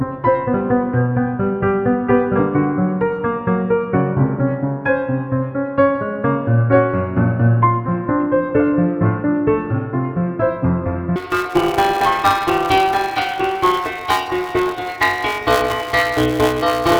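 A recording of sounds in which, from 11.16 s to the end, planar audio read as interleaved turns 5.33 ms blocks into a robotic 188 Hz buzz without octave shift, which fits 256-sample blocks.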